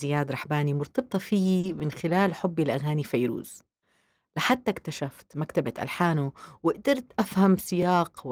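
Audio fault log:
1.59–1.65 s, short concealed packet loss: about 40 ms of audio arrived too late to decode, so the receiver extended the preceding speech to fill it, leaving a brief smear or wobble.
1.63–1.69 s, lost packet rebuilt from error correction: what sounds like two lost packets were replaced by low-bitrate copies carried in the following packets, making about 40 ms of speech rougher and noisier but without a gap.
1.80 s, 4.81 s, 7.82 s, overlapping chunks: the audio was handled in 3 s chunks that each began about 13 ms early, so a sliver replays at every join, heard as a regular click or stutter.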